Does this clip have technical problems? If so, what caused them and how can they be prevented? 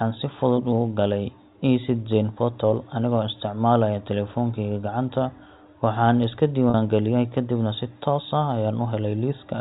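Yes, there's one: a packet loss with pitch repetition at 6.70 to 6.74 s, where about 40 ms of audio went missing, which fits two 20 ms packets dropping. The receiver covered the hole by looping the last pitch period, so you hear a brief held, slightly buzzy stretch before the sound picks back up. The telephone-band G.711 coding underneath stays clean. Adding a jitter buffer with forward error correction, or fixing the network path's loss, would prevent it.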